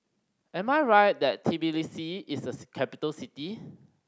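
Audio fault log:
No faults found; the speech has passed through a call's microphone processing, which removes the lowest bass and leaves nothing above 8 kHz, as expected for that path.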